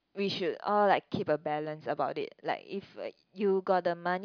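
Speech, with nothing technically wrong to point to at any moment.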